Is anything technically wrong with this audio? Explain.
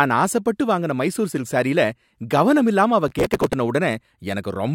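Yes. From 3.08 to 3.53 s, just after "சில்க் சாரியில கவனமில்லாம அவ", there is processor overload crackle. The processor fell behind and missed dozens of deadlines for audio buffers of roughly 3 ms each. Each missed buffer was skipped, leaving a hard-edged gap, and the run of gaps produces a gritty, tearing crackle over the speech.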